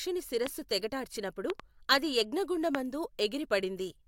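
Speech interrupted by four sharp loud pops: one at 0.47 to 0.49 s, just before "తెగటార్చినపుడు అది", a quick double pop at 1.50 to 1.62 s, and one at 2.75 to 2.77 s, each peaking about 15 to 20 dB above the speech. The likely cause is a sudden voltage pulse from a switch, plug contact, static or driver glitch.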